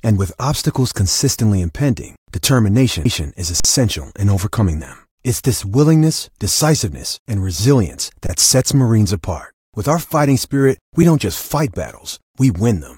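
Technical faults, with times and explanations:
3.60 s to 3.65 s and 8.27 s to 8.29 s, underrun with held sample: the speech briefly freezes into a flat, silent stretch of about 46 ms and then 23 ms, with little or no click as it stops and only a soft one as it resumes. The output buffer ran dry, so the converter held its last value until data arrived. Playback then resumed where it had paused, so no audio appears to be missing. The gap lengths fit buffers of 2048 and 1024 samples at 44.1 kHz.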